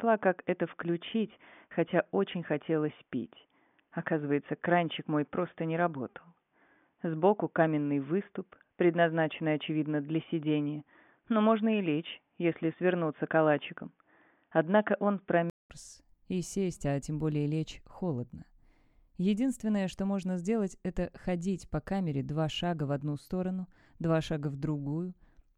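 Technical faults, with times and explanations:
0.0–15.7 s, input switched to a poorer device: the audio is dull and boxy, with nothing above 3.6 kHz. At 15.7 s a gap of about 200 ms is followed by full bandwidth, a level shift of around 5 dB, and a different faint noise floor well below the signal. The likely cause is a change of capture device. A simple low-pass filter or codec bandwidth drop would not also change the level, the noise and the tone at the same gap.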